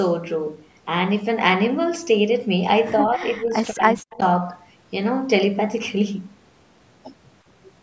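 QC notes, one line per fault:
3.08–4.21 s, speech suppressed in double talk: the talker's level repeatedly collapses, at worst by about 40 dB, for around 0.7 s in total. This is likely an echo canceller that, with both sides talking, could not separate the near voice from loudspeaker echo and attenuated both.
4.11–4.25 s, echo leak: a faint delayed copy of the voice, arriving 152 ms late and roughly 25 dB below the speech, slips through. This is likely residual loudspeaker pickup that the far end's echo canceller failed to remove and sent back.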